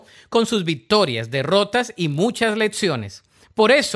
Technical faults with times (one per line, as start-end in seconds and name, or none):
0.92-2.78 resampler restarted on every block